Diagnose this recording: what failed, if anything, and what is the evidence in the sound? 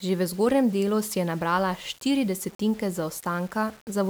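The sample-format conversion likely reduced this speech to 7-bit resolution with plain rounding and no dither: low bit depth without dither. Throughout the clip, quantisation error tracks the signal, leaving a grainy distortion about 30 dB down that roughens quieter passages and drops out or sputters in near-silent gaps.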